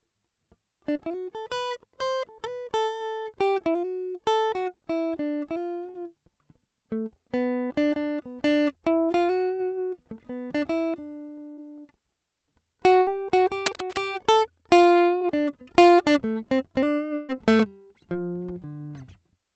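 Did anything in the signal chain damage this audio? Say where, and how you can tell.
Yes. The damage comes from two stages: the network path of the call, and most likely the analogue wiring.

Short concealed packet loss, network stage. Brief smears or wobbles in the music occur at 0.93, 5.91, 15.19 and 18.13 s. Each one replaces about 20 ms of audio that reached the decoder too late. The receiver covered each hole by extending the last sound for roughly 11 to 22 ms and then blending back into the real signal. That produces a tiny wobble rather than a clean gap.

Burst of packet loss, network stage. There are longer holes at 11.51 to 11.59 s and 13.01 to 13.09 s, each about 60 ms. A third runs from 17.15 to 17.31 s and is about 140 ms. It does not drop to silence. Instead, the last sound is held as a buzz or hiss that fades away. The music then picks up further on, and the material in between is gone. 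Several consecutive packets went missing each time.

Cable scratch noise, analogue wiring. From 13.66 to 13.98 s, dense, uneven scratching sits over the music at about 10 dB below it. The rapid, irregular bursts point to contact resistance jumping around. That is likely a worn cable, connector or control being moved. It arrives just after the second burst, but it has a different character from the network dropouts.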